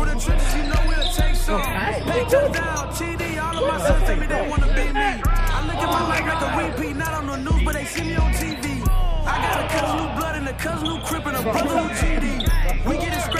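Nothing here stands out as a technical fault at any point; the audio just runs along without a glitch worth pointing to.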